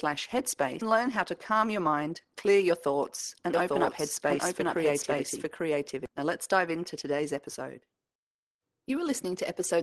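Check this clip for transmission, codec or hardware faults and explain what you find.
Three faults are audible in the speech: one forward jump, one hurried stretch, and one passage heard twice.

Skip ahead, at 0.81 s: about half a second of speech is dropped and the two sides are spliced with no gap. Unlike a dropout, no silence or fill marks the loss.

Jitter buffer speed-up, 1.51 to 2.71 s: the buffer trims tiny pitch-period slices to shed about 100 ms of excess delay, so speech runs at 109% speed with unchanged pitch. Resampling would raise the pitch instead.

Doubled audio track, 3.54 to 6.06 s: a second full-band copy at roughly equal level trails by about one second, starting and stopping abruptly. This is likely a slower second capture path. It lacks the decay and room colour an echo would have.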